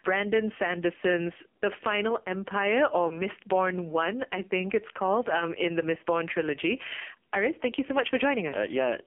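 Throughout, the speech carries heavy AMR narrowband mobile codec damage. The band runs only from 250 Hz to 3.4 kHz. The voice sounds buzzy and synthetic, which fits a low rate near 5.9 kbps.

From 3.08 to 3.21 s, one AMR speech frame is lost. The decoder fills the 20 ms gap with fading, repeated settings, so the sound briefly dips or warbles.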